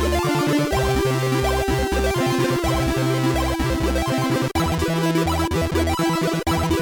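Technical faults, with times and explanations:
Nothing here stands out as a technical problem; the audio just runs along without a hitch.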